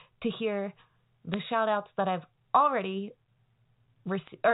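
Bit errors on a digital phone line flipped individual bits in the G.711 A-law stream, each one corrupting a single sample, and hits on the sign or high-order bits turn into sharp ticks in this speech clip. A brief tick lands at 1.34 s, between "to hear" and "shout outs that I've", and a lighter, sparser burst of crackle runs from 4.23 to 4.29 s, with the speech beneath it unchanged and the 4 kHz telephone band intact.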